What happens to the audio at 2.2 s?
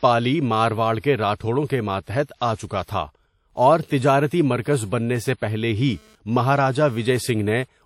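A pre-echo runs from 2.23 to 2.29 s, about 55 ms. A short hiss rises just before a sharp onset, and the attack sounds smeared. The codec spreads its quantisation noise across a whole block, so noise sized for the loud attack also fills the quiet gap ahead of it. Behind this, the speech carries plainly audible codec damage throughout. It has a ringing, washy quality and a hiss that breathes with the signal. Nothing survives above 16.7 kHz. The likely cause is WMA compression, which fits a bitrate around 48 kbps.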